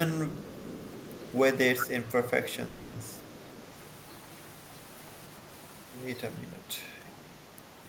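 From 0.29 to 1.36 s there's an echo leak: a faint copy of the speech trailing the original by about 0.41 s, sitting well below it at roughly 30 dB down. It comes back briefly and a bit stronger, around 20 dB down, from 1.79 to 1.84 s. The likely cause is a far end on speakerphone whose echo canceller let some of its own loudspeaker output slip back into the mic and down the line.

At 2.67 to 2.95 s you get a call audio freeze. For about 260 ms the sound stalls and is filled in with a drawn-out continuation of the last bit of audio, a fading buzzy hold rather than true silence. Then the speech carries on from exactly where it stopped, so nothing is lost, but everything after it now lands about 260 ms late. That's likely packets arriving late and the jitter buffer running dry.

The echo leak returns from 3.15 to 3.53 s, this time very faint, roughly 40 dB under the speech, with the same delay of about 0.41 s.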